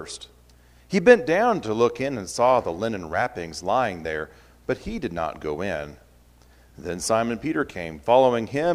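No technical faults are audible.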